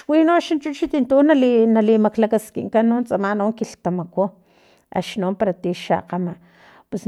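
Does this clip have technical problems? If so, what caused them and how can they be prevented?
No, there are no technical faults to report in this speech recording. No working path is listed, so there is nothing further to describe about how any stage of the chain behaves.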